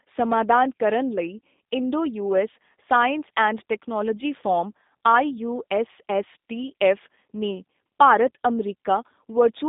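The speech has passed through a G.729 codec, and the sound fits the 8 kbit/s G.729A variant. The voice is rebuilt from a vocal tract model plus sparse pulses, so it sounds plainly rough and synthetic throughout, confined to roughly 200 Hz to 3.7 kHz, with nothing above 3.8 kHz.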